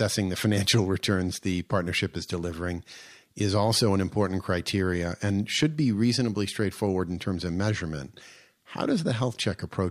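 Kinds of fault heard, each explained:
No technical fault can be heard anywhere in the speech recording, and the signal stays continuous and undisturbed throughout.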